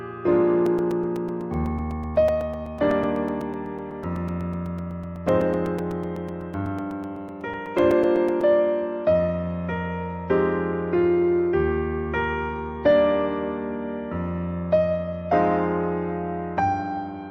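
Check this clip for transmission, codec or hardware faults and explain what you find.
Periodic USB or driver dropouts run from 0.66 s to 8.41 s. Every 0.125 s, eight times a second, something stalls the USB link or audio driver and a few milliseconds of audio are replaced with silence, about seventy gaps in all. Each abrupt cut and restart of the waveform makes a small click, so the passage carries a steady ticking that follows the signal and stops wherever the sound itself stops.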